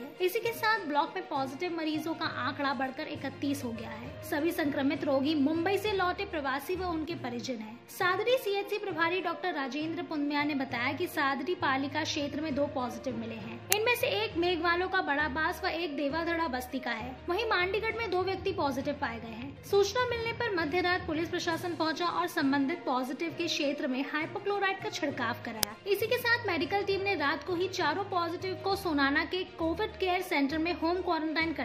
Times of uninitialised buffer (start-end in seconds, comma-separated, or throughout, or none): 13.72, 25.63